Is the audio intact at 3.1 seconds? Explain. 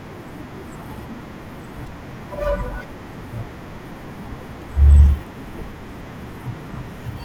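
Yes, at 3.1 seconds the audio is intact, with no dropout, click or other fault.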